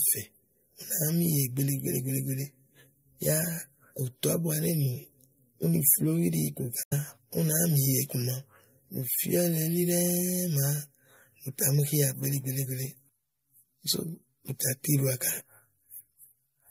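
Damaged data in the compressed stream hits the speech from 6.81 to 6.93 s. Corrupted bytes make the decoder misread those frames and lose sync while it hunts for the next valid frame header, so about 0.12 s of speech is lost to a brief glitch.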